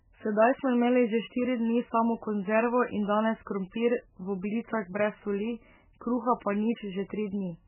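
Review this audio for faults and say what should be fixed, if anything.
Across the whole clip the speech sounds dull and watery, with a swirling, warbling texture and chirpy artefacts on sibilants, and nothing is audible above 3 kHz. This is likely MP3 compression at a very starved rate, which fits a bitrate around 8 kbps: the encoder removes all treble above a fixed cut-off and zeroes weaker spectral lines that flicker in and out between frames, smearing consonant attacks. To prevent it, encode from the original source at a much higher bitrate or use a lossless format.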